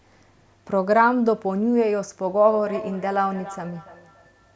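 Speech, with feedback echo between two devices starting at about 2.41 s and running to the end of the clip. From that point each utterance comes back at a steady interval of roughly 300 ms, with the loudest repeats at about 15 dB below the direct speech. The cause is a second device in the same room playing back this microphone's signal, which the microphone then picks up again, and the local echo canceller cannot remove audio it did not play itself.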